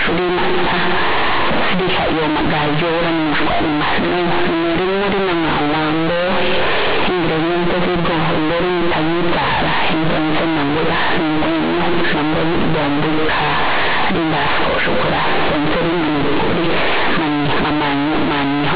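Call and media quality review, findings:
Companded audio read as linear, whole clip. Very loud, harsh buzzy distortion; heavy noise filling pauses. Probable component: decoder or playback path. Mu-law bytes played as plain 8-bit samples without expansion, so every sign change swings across half the range and quiet passages come out as large as loud ones. G.711 mu-law coding at 8 kHz itself intact.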